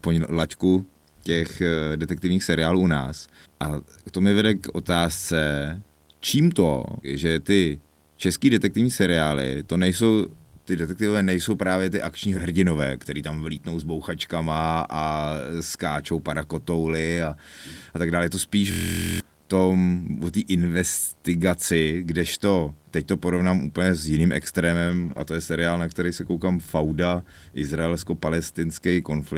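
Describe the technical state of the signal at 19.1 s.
At 19.1 s the system had frozen while the sound hardware kept replaying its ring buffer. This system hang loop runs from 18.72 to 19.20 s: a 23.22 ms piece, which fits a 1024-sample buffer, repeats 21 times at 43.1 Hz, heard as a buzz at that rate. About half a second of audio is lost.

Underneath, a screen or video cable is coupling into the audio path. This video or display buzz sits at the 75 Hz field rate with hash above it, roughly 35 dB below the signal.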